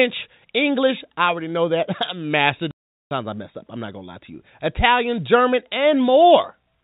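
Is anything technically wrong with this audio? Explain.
Yes. From 2.71 to 3.11 s the speech drops out into a 400 ms hole of dead silence with abrupt edges. This is packet loss filled with silence: the receiver played silence for the missing audio, and a gap this long fits about forty 10 ms packets. The G.711 telephone coding is working normally, which is why nothing above 4 kHz comes through.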